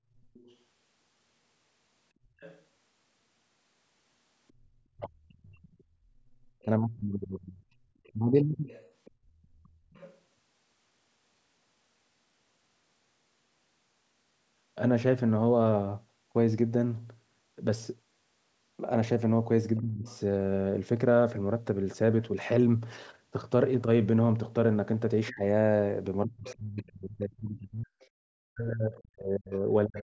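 A speech recording, band-limited by call microphone processing to nothing above 8 kHz, carries a faint second talker at 0.34–0.56 s, 2.4–2.62 s, 4.48–10.18 s, 19.77–20.16 s and 25.28–29.58 s. This is the other side's voice leaking through, roughly 20 to 35 dB under the main voice, likely because loudspeaker sound reached the microphone and the echo canceller left part of it behind. Unlike crosstalk on the line, it is a separate voice layered on top. Speech suppressed in double talk overlaps those stretches at 4.95–8.7 s, 19.8–20.07 s and 25.31–30.04 s. There the main voice sinks or breaks up, by as much as about 40 dB and for about 3 s in total in the last span, while the leaked voice keeps going. Those dips line up with the far-end speech rather than falling at random as network dropouts would, which points to the canceller turning everything down when both sides talked at once.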